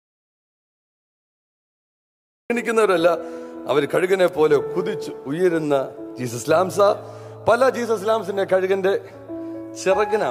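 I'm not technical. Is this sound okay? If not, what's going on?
No. The clip opens with an audio dropout to silence: from the very start until about 2.5 s there is nothing at all, not even faint background hiss, before sound begins mid-flow. That total dead air, rather than a quiet room, suggests the input was likely disconnected or muted.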